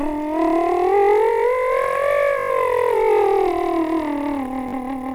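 A music clip with two episodes of Bluetooth stutter, where the wireless link dropped or delayed packets and the receiver filled each gap by replaying its last short buffer of sound. At 2.39 to 2.50 s about 0.1 s of music is lost, heard as a rapid machine-gun repeat, and at 4.69 to 4.73 s a shorter 40 ms gap gives a brief buzz. After each, the music resumes further along, skipping the missing span as though it had kept playing.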